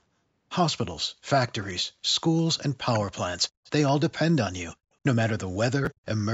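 Speech that has passed through a call chain, its band ending at 8 kHz as normal call microphone processing leaves it, shows three faults. Between 2.82 and 3.12 s, the echo canceller was likely caught in double talk and could not tell the near talker from loudspeaker echo, so it pulled both down. This is speech suppressed in double talk: the speech drops very deeply, nearly to silence, for about a fifth of a second in total. From 3.64 to 3.71 s comes an echo leak, where the canceller likely let some of the far end's loudspeaker sound through and sent it back. A faint copy of the speech trails the original by 159 ms, far quieter than the speech itself. At 5.85 to 5.87 s, chunks out of order appear: one block of audio, which fits a 10 ms chunk size, arrived one place late and plays after the chunk that should follow it. Nothing is missing, but three hard joins produce a brief jumbled moment.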